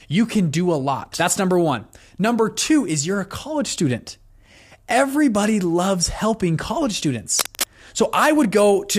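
A worn cable, connector or control being moved is the likely cause of the cable scratch noise from 7.37 to 7.66 s: as the contact shifted, its resistance jumped about rapidly and let irregular bursts of noise into the signal. For roughly 0.3 s a dense, uneven scratching and rustling sits over the speech, only a little quieter than the speech itself, so it stands out clearly before it stops.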